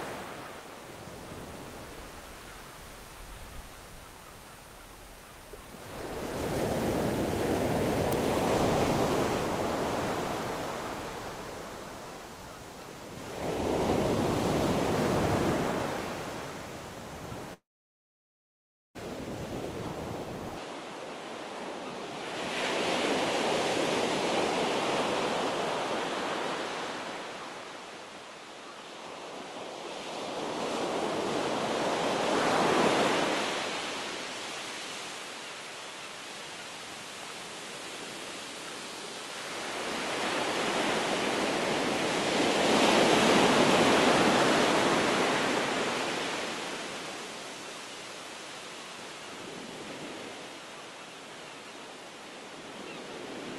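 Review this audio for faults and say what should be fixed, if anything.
A long network dropout runs from 17.53 to 18.97 s. About 1.4 s of sound never arrives: a brief fading fill gives way to roughly 1.3 s of silence, likely from lost packets. Its length and silent gap distinguish it from a short glitch. Larger jitter buffering or redundant packets would prevent it.

From 20.57 s to the end the input likely switched to a poorer device. There is nothing above 11.4 kHz, and a new background noise sits roughly 45 dB below the sound. The level stays the same and there is no gap, but the new noise sets it apart from a plain codec bandwidth cut. Locking the input device would prevent this.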